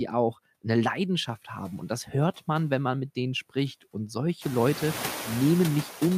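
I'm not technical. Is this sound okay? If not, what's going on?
No. Throughout the speech, the background noise drops away in pauses and comes back under the talking. That is noise suppressor artifacts, a cleanup filter turning the noise down whenever no one speaks. The room's own background noise gets louder at around four and a half seconds.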